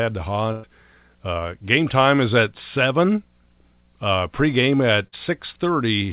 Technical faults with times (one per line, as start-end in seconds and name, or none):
0.52-0.66 burst of packet loss
5.07-5.15 burst of packet loss